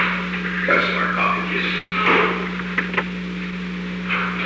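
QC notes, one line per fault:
1.78–1.94 s, call audio freeze: likely delayed packets. The last sound smears into a fading buzz, then a 40 ms blank band on the spectrogram; audio resumes intact, 0.14 s late.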